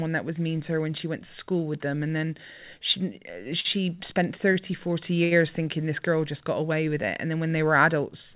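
Sound briefly hangs with a faint buzz or dip just after "them and then she" at 3.6 to 3.66 s, again at 4.52 to 4.56 s, and at 5.24 to 5.33 s before "thinking this girl just": short stalls from late packets, where the jitter buffer ran dry and stretched the last sound by 44, 16 and 70 ms until audio resumed without loss. The narrowband sound, with nothing above 4 kHz, fits a G.711 call path.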